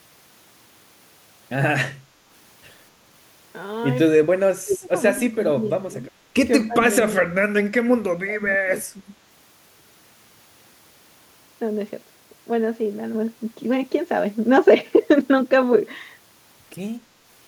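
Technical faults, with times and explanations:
4.37–4.89 s, 5.16–6.10 s, 6.67–6.75 s, 7.19–7.43 s, 8.10–8.72 s and 8.93–9.12 s, speech suppressed in double talk: the voice dips and breaks into pieces, dropping by up to about 35 dB in the first stretch and about 15 to 25 dB later. This is likely an echo canceller that cannot tell the near talker from loudspeaker echo while both sides speak, and so attenuates both.
4.70–4.78 s, echo leak: a brief, faint scrap of voice arrives 253 ms behind the original, at about 25 dB below the speech. A loudspeaker-side echo canceller likely left part of its microphone pickup uncancelled, and that residue was sent back down the line.
13.15 s to the end, sudden gain jump: speech and background noise together step up by about 4 dB at a single instant and stay there. This is likely a digital gain setting applied abruptly between samples, with no ramp to smooth the change.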